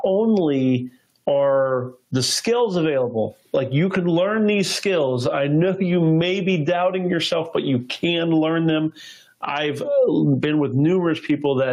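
Throughout the clip there is gain pumping: the level clamps down under each loud sound, a swing of around 10 dB, so the sound feels breathing and squashed. The likely cause is input gain set far too high, with a fast limiter or compressor clamping down on each peak. On a waveform the peaks look flattened and uniform, and on a spectrogram the noise floor brightens between events and dims beneath them.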